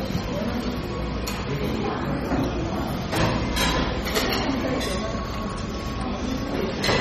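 Sounds carry plainly audible MP3 compression throughout, with nothing above 14.4 kHz and watery, swirling artefacts, likely from a starved encode, which fits about 32 kbps.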